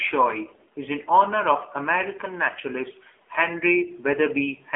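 From start to finish, the speech carries AMR narrowband mobile codec damage. Nothing above 3.7 kHz survives, and the line band sits at 300 Hz to 3.5 kHz, so the sound is thin and boxy with no air or sibilant detail. The codec rebuilds the voice from a vocal-tract model fed by sparse pulses. At this level the result is plainly buzzy and synthetic, which points to a low AMR-NB mode around 7.4 kbps.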